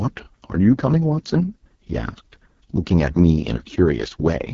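From start to finish the speech sounds rough and raspy, with a buzzy, gritty edge. Nothing is present above about 7.2 kHz. This is heavy AMR wideband (HD Voice) codec damage. The codec models speech with a pulse-driven vocal tract and pads the top band with shaped noise. At this level of degradation, which fits its lowest rate of 6.6 kbit/s, that model cannot reproduce the voice cleanly.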